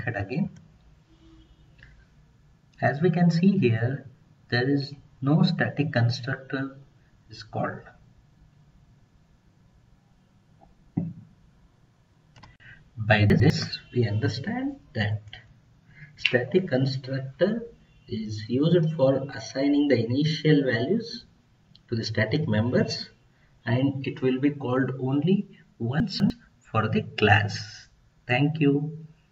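Chunks out of order occur at 13.3–13.5 s and 26.0–26.3 s. A 100 ms chunk plays one place late, then two places late, giving a jumbled moment with three hard joins. Unlike a dropout or stutter, no audio is missing or repeated.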